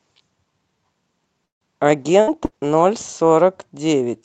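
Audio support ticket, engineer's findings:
Call audio freeze, 1.45–1.64 s: brief stall, mostly dead silence for about 150 ms after a short fading tail, then the speech picks up where it left off with nothing skipped. Likely packets held up in transit and the jitter buffer draining, so everything after sits about 160 ms later.

Call bitrate drop, 2.16 s to end: speech goes rougher and more watery for the rest of the clip, bottoming out for about 1.7 s. Sounds like the bandwidth estimate fell and Opus got pushed from about 64 down to about 28 kbps, coding much more coarsely.

Burst of packet loss, 2.21–2.30 s and 2.45–2.54 s: two short holes inside the low-bitrate stretch, each a held buzz or fading hiss, then a jump ahead. About 60 ms of speech actually gone each time, so not just delayed; the receiver concealed the gap and moved on.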